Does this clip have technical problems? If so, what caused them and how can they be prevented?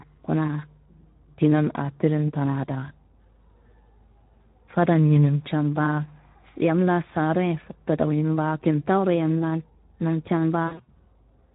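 Yes. The speech carries plainly audible Speex codec damage throughout. With few bits left for the excitation, the voice sounds hoarse and noisy, which fits a low setting around 11 kbps. Prevent it by choosing a higher Speex quality or a modern codec.

From 10.67 to 10.92 s, just after "yam laan namcen", VoIP packet loss is concealed by the speech codec. The decoder stretches its last pitch and filter into a fading sound. Gaps are scattered, the longest about 60 ms. Prevent it with a jitter buffer, forward error correction, or a steadier network.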